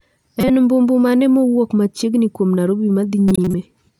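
At 0.41 to 0.50 s, just before "mbu mbu mane mowuok", a corrupt frame decoded over a few frames misplaces energy in frequency, giving a glitch. After "mowuok machiegni kuom narobi", 3.28 to 3.54 s brings a longer glitch. Spectrograms show bright smears unrelated to the speech harmonics, and the waveform shows spiky blocks.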